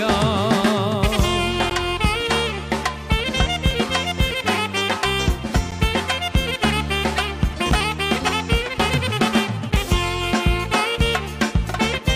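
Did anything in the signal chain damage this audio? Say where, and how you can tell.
Yes. At playback, mismatched segment time stamps cause gaps between stream segments, which the player fills with silence. This leaves hard-edged 4 to 13 ms holes every 2 s, at 1.70, 3.71, 5.71, 7.72 and 9.72 s.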